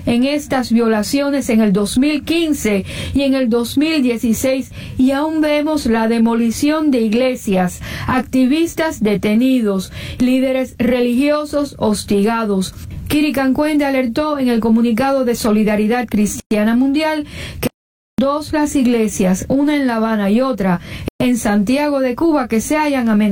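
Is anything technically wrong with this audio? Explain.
Yes. At 16.40 s (about 111 ms) and 21.08 s (about 121 ms) there is a gap at a join of encoded pieces. Separately encoded segments were joined without trimming, so encoder delay and final-frame padding leave short silences. The edges are smeared, and the sound resumes exactly where it stopped.

From 17.67 to 18.18 s there is an audio dropout to silence lasting about 512 ms, likely from lost input while recording continued. Unlike the join gaps, it is longer, falls to silence with no room tone, and the material in between is missing.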